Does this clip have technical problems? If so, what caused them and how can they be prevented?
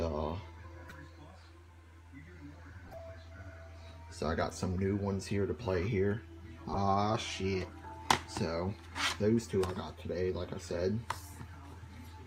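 Yes. At 0.89–0.92 s, 2.85–3.00 s, 5.54 s and 6.74–6.77 s, there are short chirps and noise bursts. These are corrupt frames decoded: bit errors in compressed frames were played anyway, putting energy at the wrong frequencies. The loudest burst is near 6.7 s. Checksum verification with concealment of damaged frames prevents this.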